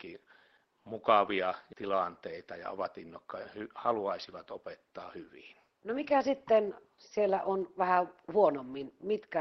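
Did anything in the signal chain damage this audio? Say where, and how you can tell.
No, nothing in the signal chain damaged this speech, and the only background is the room noise picked up at the microphone, which sits about 52 dB below the voice and belongs to the recording itself.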